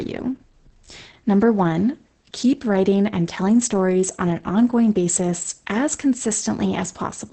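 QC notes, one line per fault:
Throughout, Opus voice compression: heavy damage, with nothing above about 8.6 kHz. The speech sounds muffled, hoarse and slightly robotic because its excitation is coded very coarsely by the linear-prediction coder, which fits wideband SILK at roughly 10 kbps.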